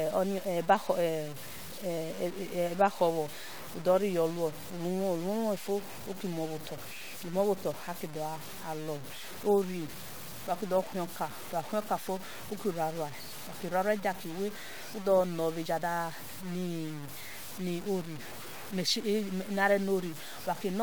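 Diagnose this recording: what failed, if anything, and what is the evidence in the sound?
Grainy, gritty distortion runs through the whole speech clip and shifts with the sound. Quiet passages turn roughest. The likely cause is low bit depth without dither at sample-format conversion. The grain fits truncation to 6 bits, with error roughly 15 dB below the signal.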